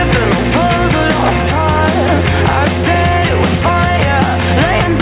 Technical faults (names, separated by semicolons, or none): gain pumping